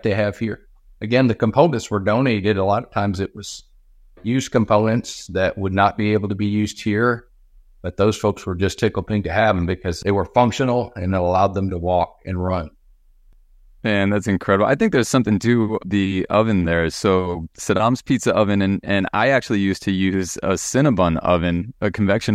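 Nothing in this bit of speech stands out as a technical fault, so there's really nothing to flag here.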